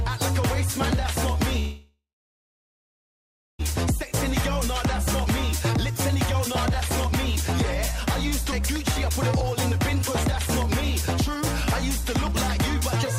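At 1.59 s the audio stalls and doesn't resume until 3.61 s. The last bit of sound is stretched into a brief fading buzz, then goes quiet for about 1.5 s of the roughly 2 s gap. That's a call audio freeze, likely from packets getting held up so the jitter buffer ran dry. When things resume, it picks up right where it stopped, so nothing's lost; it's just been pushed about 2 s later.

From 4.98 s to 6.35 s you get a jitter buffer speed-up. The receiver is working off that backlog by trimming tiny pitch-period-sized slivers over and over, so playback runs about 6% fast at unchanged pitch and feels a little rushed. Around a tenth of a second gets shaved off here. A second, gentler speed-up runs from 7.07 s to 12.96 s at about 3% faster, clawing back roughly another fifth of a second. It's subtler.

Inside that second speed-up, at 8.51 to 8.54 s, there's a skip ahead. Roughly 150 ms of audio just vanishes, and the material on either side is butted together with essentially no gap. 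It's a quick forward jump rather than a dropout, so you hear a tiny abrupt lurch where a chunk of sound is simply missing.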